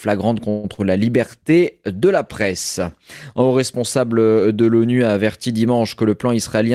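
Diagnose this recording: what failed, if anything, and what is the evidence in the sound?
Network stage: from 0.49 to 0.66 s the sound stretches into a fading buzz for about 0.14 s, then resumes intact. That's likely a call audio freeze, with the jitter buffer running dry.

Network again: a short concealed packet loss at 0.74 to 0.79 s, where 40 ms went missing and the receiver papered over it with a brief smeared continuation.

Codec stage: a call bitrate drop from 1.17 to 5.57 s, with Opus going from 48 to 18 kbps and sitting at the bottom for about 2.1 s. It sounds rough and dulled.

Buffer stage: a jitter buffer speed-up from 6.03 to 6.65 s. It runs at 107% with the pitch unchanged, after the receiver trimmed about a twentieth of a second to cut its delay.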